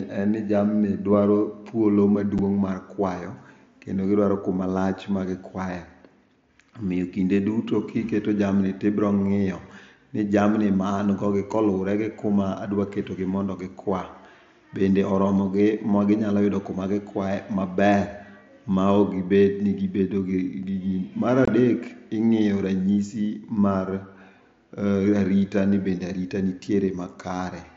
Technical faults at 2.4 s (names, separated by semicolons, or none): unconcealed Bluetooth headset packet loss